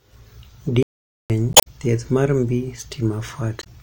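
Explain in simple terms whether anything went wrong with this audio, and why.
The speech stops dead at 0.83 s and stays silent until 1.30 s, roughly half a second. This is a playback stall, likely caused by the player running short of data or being held up.

Two short glitches follow, at 1.50 to 1.67 s just before "thieth mar", and at 3.59 to 3.67 s. These come from damaged data in a compressed stream: the decoder hits corrupted bytes, produces a brief glitch, and jumps ahead to the next readable chunk.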